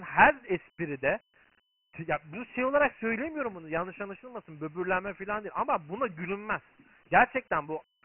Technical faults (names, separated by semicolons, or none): Dialogic VOX ADPCM